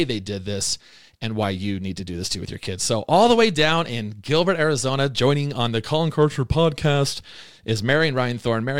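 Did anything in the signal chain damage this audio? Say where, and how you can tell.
Yes. There are dropped samples at 1.43 s, between "they did this and" and "you need to do", and again at 8.18 s. Each is a sharp click where the waveform jumps across a tiny fraction of a millisecond of missing signal, shown as a thin vertical spectrogram line. The likely cause is a driver or buffer hand-off losing samples.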